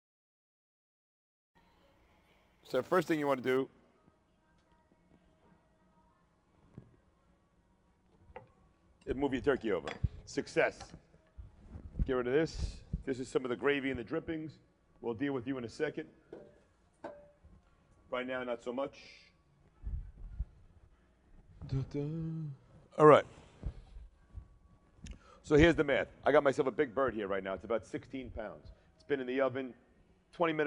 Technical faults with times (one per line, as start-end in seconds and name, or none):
0.00-3.57 imaging from sample-and-hold upsampling